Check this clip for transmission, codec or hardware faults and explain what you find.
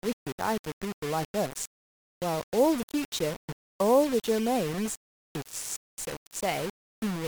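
One fault runs through the whole recording: low bit depth without dither. The speech sounds gritty and grainy, with the roughness rising and falling with the level, while quiet tails sputter or cut to silence. The likely cause is rounding to about 4 bits with no dither, leaving an error only around 15 dB below the signal.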